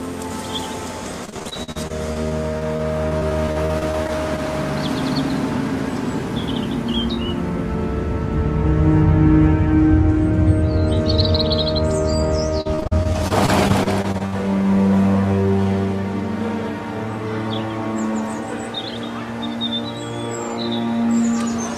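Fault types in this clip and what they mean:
Repeated packet loss (robotic sound): Audio keeps dropping out in short bursts from 1.25 to 4.40 s and again from 12.61 to 14.34 s. Each hole gets papered over by stretching the last sound, so it turns choppy. Gaps run up to 62 ms, and roughly a fifth of each stretch is patched.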